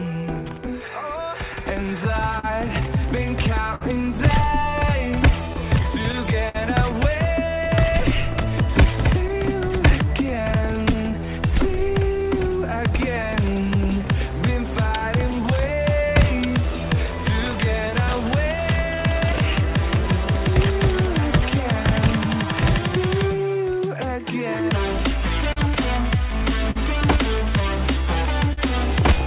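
Clock drift between sender and receiver runs through the whole clip. The sending clock is roughly 3% slow relative to the receiver, so the jitter buffer keeps draining. The receiver has to make up the shortfall. The result is a faint, persistent unsteadiness rather than one obvious event, heard over audio that is band-limited to 4 kHz by the G.711 mu-law call path.

Repeated timing corrections follow from that drift and span 0.43 s to 28.03 s. To stay in step, the receiver repeatedly repeats short slices of audio, all in the same direction and at uneven spacing. Overall playback runs at 98% speed, with something like half a second added across the stretch. Each edit is small, so it comes across as slight hiccups and a subtly dragging, uneven tempo.

Scattered short gaps appear in three clusters where packets arrived too late or not at all and the receiver concealed each hole by extending the preceding sound. 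From 2.39 s to 10.95 s there are about ten of them, totalling around 200 ms, the longest near 50 ms. From 14.99 s to 17.94 s there are about four very brief ones of roughly 15 ms at most. From 25.53 s to 28.59 s there are about three, totalling around 150 ms, again up to about 50 ms. They register as brief ticks, smears or stutters in otherwise continuous sound.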